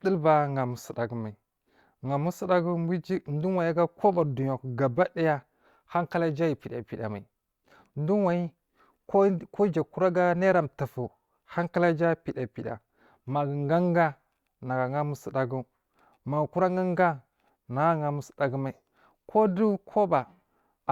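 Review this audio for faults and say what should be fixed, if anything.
Nothing in this speech audio needs to be fixed, as no faults can be heard.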